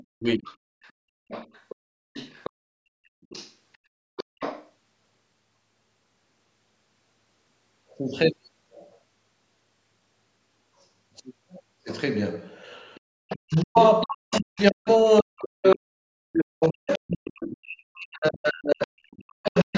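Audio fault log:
0.0–4.67 s, 12.95–15.72 s, 16.93–16.98 s and 18.82–19.78 s: other side's voice leaking through. A second voice sits roughly 20 dB under the speech, nearer 25 dB at 16.93 s. It is likely loudspeaker echo the canceller missed.
0.15–0.46 s and 13.35–19.75 s: speech suppressed in double talk. The voice drops in pieces, by up to around 40 dB. In the later span this adds up to about 5 s. The likely cause is the canceller turning both sides down together.
13.0–13.07 s: background gated by the echo canceller. The room sound falls away by about 40 dB for 70 ms while the loudspeaker plays. It returns when the canceller releases.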